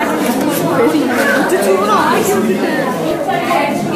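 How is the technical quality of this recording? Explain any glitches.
Two brief glitches interrupt the recording. At 1.98 s and 3.11 s the sound jumps abruptly, losing roughly a hundredth of a second and then a few hundredths. Each is likely a dropped buffer (overrun), where audio was overwritten before being read and the remaining sections were spliced together without any gap.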